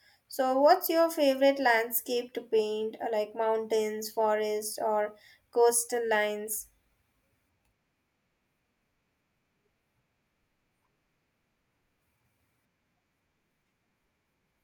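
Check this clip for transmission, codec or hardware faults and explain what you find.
I found no faults in this clip.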